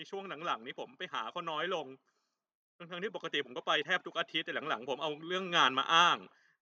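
From 4.46 s to 6.27 s the whole sound swells: the speech and the room tone behind it grow louder together, climbing by about 4 dB over nearly two seconds rather than jumping. That is automatic gain rising. The gain control judged the incoming level too quiet and eased its amplification upward. Because it scales everything it receives, the background lifts in step with the voice instead of the voice alone getting louder.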